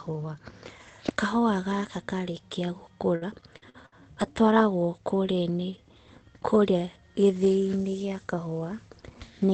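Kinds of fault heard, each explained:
Repeated packet loss (robotic sound): from 3.15 to 3.94 s, four holes, the longest 60 ms, are each patched by extending the preceding speech, so about a quarter of that stretch sounds choppy. Unlike a single dropout, the gaps recur in quick succession.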